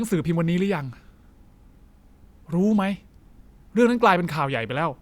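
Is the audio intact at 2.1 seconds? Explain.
Yes, the audio is intact at 2.1 seconds, with no fault audible at that moment.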